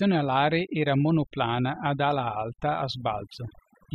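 A short speech recording carries overdone noise removal throughout. The background drops and breaks up into twinkling specks. Quiet parts of the voice vanish.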